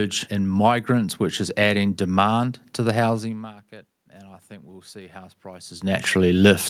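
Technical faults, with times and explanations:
3.21–5.94 s, automatic gain rising: after "adding demand to the", the input level drops by about 23 dB, around the point where the talker moves back from the microphone. The automatic gain control treats this as too quiet and raises its gain gradually, by about 7 dB over nearly three seconds. Voice and room noise swell together, because the gain acts on the whole signal, and the slow rise comes from the controller adjusting smoothly rather than in one step.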